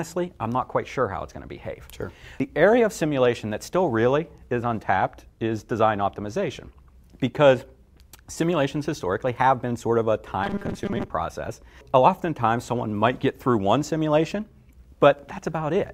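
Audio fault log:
10.44 to 11.10 s, robotic sound from repeated short buffers: for about two thirds of a second the sound turns into a rigid, metallic buzz at 200 Hz that only loosely tracks the audio. The likely cause is new data arriving too seldom, so the last 5 ms chunk is replayed to fill the gaps and roughly half the real audio is skipped. A spectrogram shows evenly spaced harmonics of 200 Hz, and the waveform shows identical 5 ms cycles repeating.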